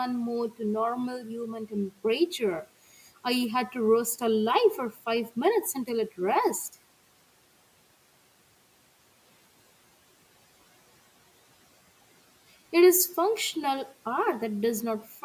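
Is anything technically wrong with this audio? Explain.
Yes. Speech was cut by the noise suppressor three times: 1.19–1.74 s (dipping about 12 dB), 4.92–5.05 s (about 10 dB) and 15.08–15.2 s (about 6 dB). The suppressor misjudged these speech fragments as noise and pulled them down along with the room noise, which sits about 27 dB below the speech. They sound swallowed and faint. A waveform would show sudden envelope dips, and a spectrogram would show speech energy thinning out.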